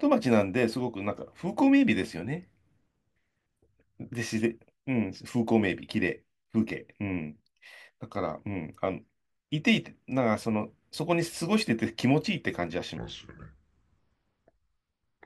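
A speech recording with one section at the wrong speed. From 12.97 s to the end at 15.26 s, playback drops to 0.695 times the original rate. Pitch falls with it, by about seven semitones, so the voice turns deep, slow and drawn out. The change is abrupt, not gradual. Speed and pitch shifting together like this is likely the result of that stretch being resampled or played against the wrong clock.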